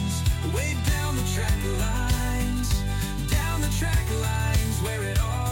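From 0.14 s to 5.51 s, word clock ticks recur roughly every 50 ms, sharp and uneven in strength. The receiving device runs unlocked from the sender's clock, off by around 500 ppm, so each time the clocks slip a single sample is dropped or repeated.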